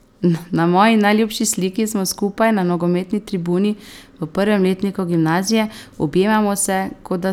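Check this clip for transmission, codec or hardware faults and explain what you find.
No transmission, codec or hardware faults turn up anywhere in this speech recording.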